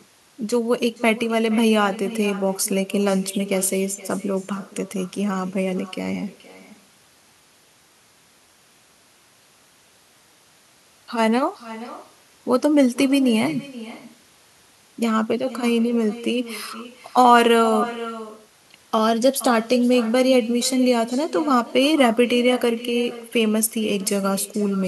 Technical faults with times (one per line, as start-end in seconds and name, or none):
0.00-24.88 echo with no canceller